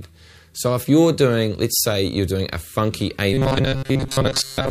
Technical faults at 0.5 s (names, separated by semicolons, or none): none